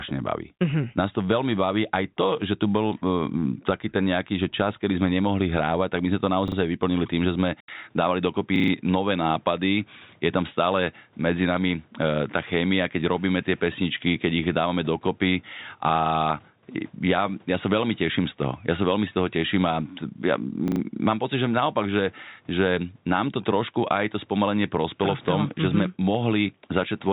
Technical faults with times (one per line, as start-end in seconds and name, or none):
6.48-6.56 repeated buffer
7.60-27.12 input switched to a poorer device
8.56-8.72 repeated buffer
20.68-20.80 repeated buffer